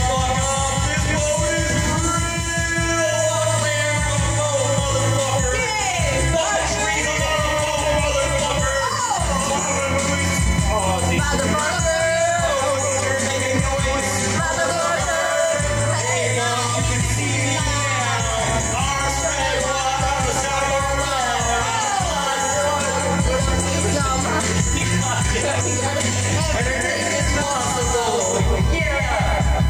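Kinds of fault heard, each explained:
USB whine: Current drawn by the USB bus in 1 ms frames leaks into the audio through power or ground, producing a steady, fixed-pitch 1 kHz tone that runs through the whole clip at roughly 15 dB below the sound.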